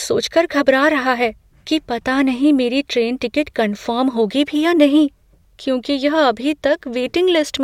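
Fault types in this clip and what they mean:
The speech signal holds steady throughout, with no dropouts, clicks, distortion or other technical faults to be heard.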